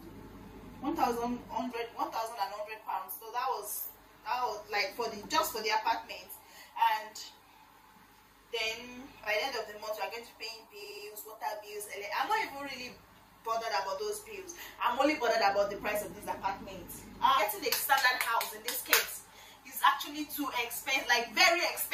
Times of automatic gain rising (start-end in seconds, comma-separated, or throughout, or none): none